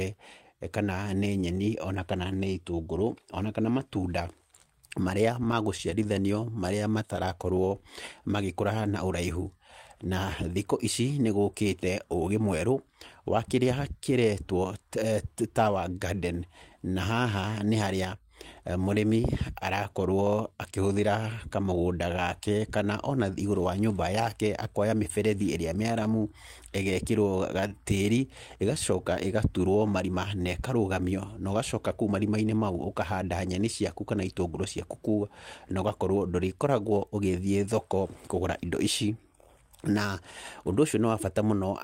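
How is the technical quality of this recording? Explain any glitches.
The speech has four network-timing glitches, all between about 5 and 31 seconds.

Repeated stalls (stutter), 5.51–7.84 s and 25.83–26.07 s: packets arrived late, emptying the jitter buffer, so the receiver stretched the last sound through many brief gaps, each at most 19 ms, making the speech stutter.

Jitter buffer slow-down, 26.67–27.69 s: to rebuild its reserve, the receiver repeated pitch periods, adding 73 ms, so speech drags at 94% speed with unchanged pitch.

Jitter buffer speed-up, 29.68–30.41 s: with excess audio buffered, the receiver trimmed around 70 ms of pitch periods, so speech runs hurried at 109% speed, same pitch.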